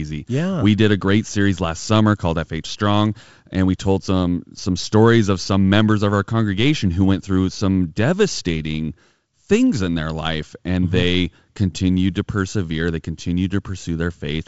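No technical faults are audible.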